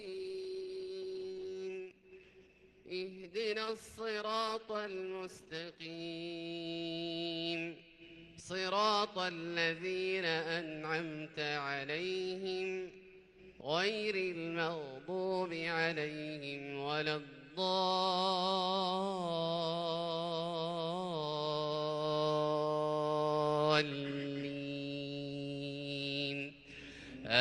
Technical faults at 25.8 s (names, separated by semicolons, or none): none